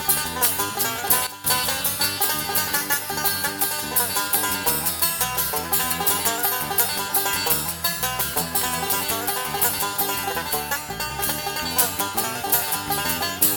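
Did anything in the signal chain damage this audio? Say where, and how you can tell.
Yes. At 1.27 s the level drops by about 12 dB in a single step, with the background noise falling by the same amount, and it jumps back at 1.44 s. This sudden gain jump is likely a digital gain setting applied without a ramp.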